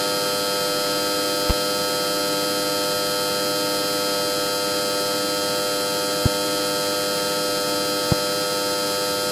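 At 1.50 to 1.53 s, 6.26 to 6.29 s and 8.12 to 8.15 s, a loud pop, roughly 15 dB above the surrounding sound, thumps through once, likely a voltage spike; the sound continues beneath, unlike a dropout.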